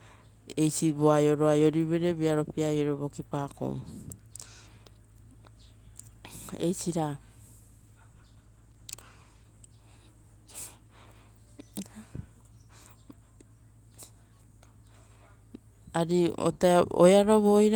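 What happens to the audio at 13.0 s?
Nothing goes wrong at 13.0 s; the audio carries on intact through that moment.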